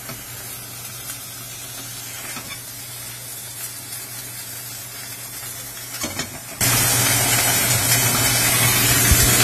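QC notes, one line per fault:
Throughout: AAC compression. The top is cut with nothing above 14 kHz, and plainly audible smearing and warbling texture fit AAC-LC at a low bitrate, likely around 32 kbps.
0.0–6.61 s: one channel inverted. Summed to mono, the level drops by about 18 dB because common content cancels, leaving a faint difference signal, likely from reversed polarity on one side.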